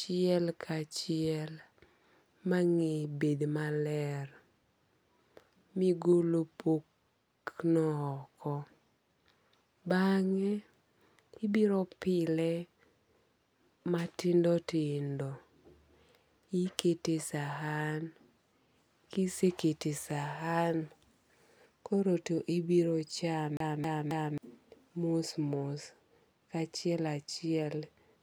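From 23.57 to 24.38 s the speech catches on a tiny fragment and stutters: the same 0.27 s sliver plays three times in quick, even succession, with a brief dropout at each restart, before the audio moves on. This is a CD stuck on one turn. A scratch on the disc knocks the laser back a track each revolution, so it rereads the same spot, and the 269 ms loop length matches the time of one turn.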